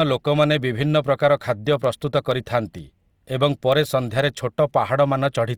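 From 0.43 s to 5.13 s, word clock ticks recur about every half second, around ten in all: an unlocked receiver's clock drifts slightly against the sender's, dropping or repeating one sample per slip. Their steady spacing, not random placement, separates them from ordinary clicks.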